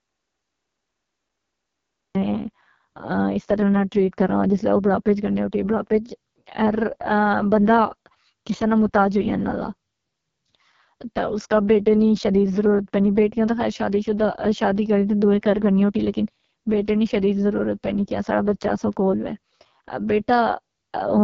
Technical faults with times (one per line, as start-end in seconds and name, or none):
0.00-21.24 AMR wideband (HD Voice) codec
0.00-2.15 audio dropout to silence